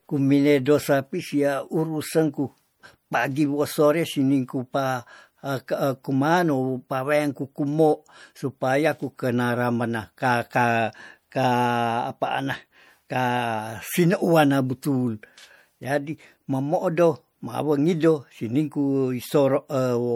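Throughout the speech there is plainly audible swirly, watery smearing. This is likely MP3 compression at a low bitrate, around 64 kbps, which drops weak frequency lines.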